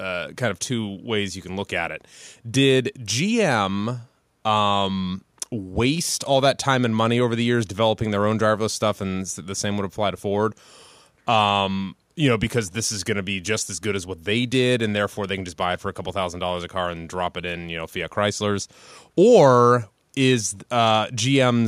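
A speech recording with no technical faults to report. Nothing in it calls for a time or a cause.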